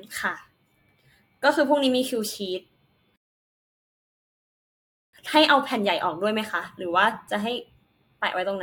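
Speech, interrupted by a rebuffering stall. At 3.16 s the sound drops to silence. It stays silent until 5.13 s, a gap of nearly 2 s. Then the speech resumes exactly where it stopped. No audio is skipped. The player simply ran short of downloaded data and waited for more to arrive before continuing. The result is about 1.97 s of added dead air in the middle of the clip.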